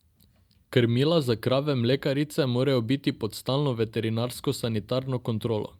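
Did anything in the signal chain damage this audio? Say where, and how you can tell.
No, nothing audible in this speech recording points to damage at any stage of the signal chain.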